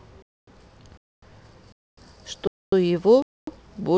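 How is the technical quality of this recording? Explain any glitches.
The speech keeps getting chopped by a gap between chunks, five times: 0.22 to 0.47 s, 0.97 to 1.22 s, 1.72 to 1.97 s, 2.47 to 2.72 s, and 3.22 to 3.47 s. The audio plays in half-second pieces, and a quarter-second of dead silence sits between each pair. That's a delivery or playback problem rather than lost material. You hear hard-edged holes on a steady 0.75 s rhythm, so the flow stutters like a metronome.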